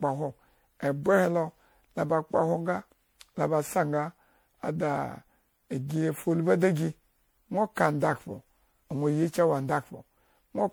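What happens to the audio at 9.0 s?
At 9.0 s the speech carries generation loss, present throughout: it sounds swirly, smeared and hollow, with blurred attacks, likely from repeated MP3 encoding near 96 kbit/s, roughly seven passes. A spectrogram shows patchy holes and smudged onsets, with nothing above 20.8 kHz.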